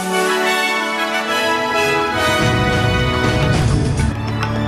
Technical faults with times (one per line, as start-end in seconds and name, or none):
3.62 repeated buffer